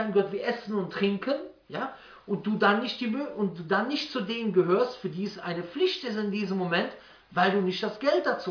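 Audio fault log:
No technical faults are audible; the signal stays steady and intact the whole way through.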